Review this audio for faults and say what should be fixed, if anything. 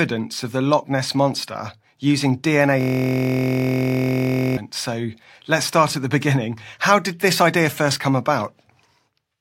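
A system hang loop runs from 2.81 to 4.57 s, right after "monster using". One 23.22 ms slice repeats about 76 times. That gives a steady 43.1 Hz buzz, which fits a 1024-sample ring buffer replaying while the driver stalled. Fix the driver or system stall, and add a watchdog that mutes output when the buffer stops refilling.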